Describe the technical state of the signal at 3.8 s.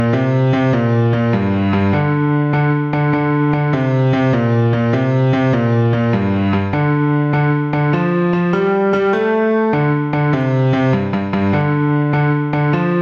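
At 3.8 s, as throughout the clip, gain pumping is audible. The gain swings by about 5 dB, likely from a fast limiter reacting to excessive input gain.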